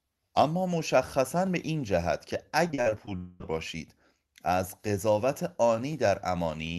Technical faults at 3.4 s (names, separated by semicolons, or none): long network dropout